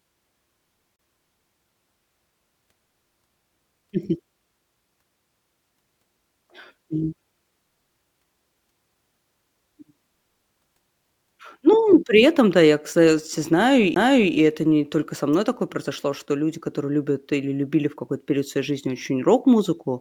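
At 0.96 to 0.99 s the speech breaks with a CD skip. The laser has jumped to another turn of the disc's spiral. Playback mutes for about 30 ms, then resumes elsewhere. A sudden jump in the speech marks the join. At 13.94 to 13.96 s it happens again, with a shorter mute of about 20 ms.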